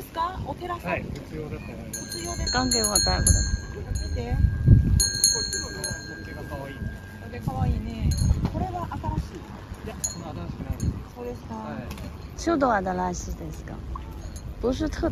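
From start to finish there's overlap-add ripple: the frames were rejoined with an overlap that doesn't sum to a flat gain, so the level dips and swells by about 6 dB around 100 times a second, giving a buzzy, robotic flutter riding on everything.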